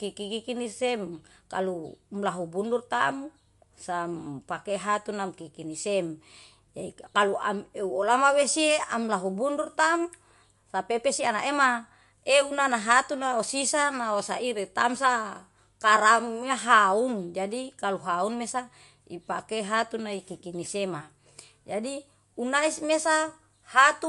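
From start to finish the speech has a plainly audible watery, swirling quality, and nothing reaches above 11.3 kHz, so the top end sounds dull and the s sounds lose their crispness. This is likely MP3 compression at a low bitrate, in the region of 49 kbps. Short of bits, the encoder removes the treble above its cutoff and drops quieter frequency detail, which flickers in and out from one frame to the next and produces that swirl.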